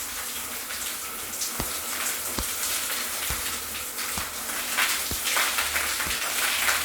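A short burst of chirpy, squeaky noise cuts through the everyday sound from 6.23 to 6.30 s, peaking fairly loud, around -15 dBFS. It is a corrupt frame decoded: flipped bits in a few compressed frames were played anyway, scattering energy across wrong frequencies.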